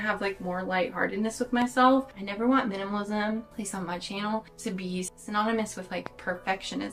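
Two loud pops cut through the sound, at 1.62 to 1.64 s and at 6.06 to 6.09 s. Each is a single sharp click, about 10 dB above the sound. The audio carries on beneath them. A voltage spike from a plug, switch or static discharge is the likely cause.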